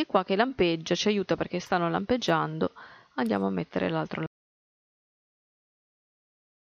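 At 4.26 s the audio cuts off mid-flow and stays in silence through to the end, about 2.5 s later, with no room tone or noise floor left behind. This is an audio dropout to silence, most likely from the input being lost while the recorder kept writing silence. On a waveform the trace collapses to a flat line; a spectrogram shows an abrupt wall after which every frequency band is empty black.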